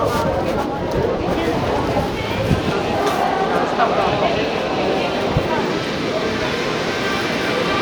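No audible technical faults.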